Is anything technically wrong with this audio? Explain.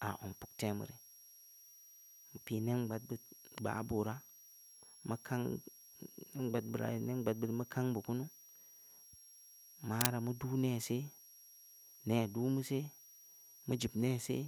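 Yes, two faults are audible.

A switching supply whistle runs through the whole clip: a thin, high tone wandering between about 5.59 and 5.75 kHz, sitting roughly 25 dB below the speech. This is the signature of a switch-mode power supply whose regulator has dropped into an audible burst mode or is beating against another supply. Its frequency shifts slightly as the load on it changes, which is why the pitch drifts rather than holding steady.

Microphone overload occurs from 10.01 to 10.06 s, where the loudest peak picks up a brief harsh, crackly edge. The sound is consistent with peaks reaching about 5 dB past the converter's ceiling, flattening their tops. Only a small share of samples in that span are affected, so the distortion is short and sharp. The likely cause is the microphone input gain being set too high for that louder moment.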